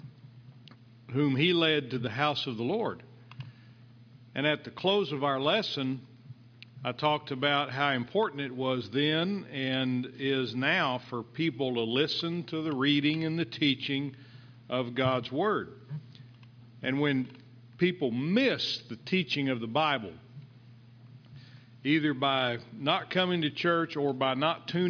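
No technical faults occur at any point in the audio, so there is nothing to describe in time order.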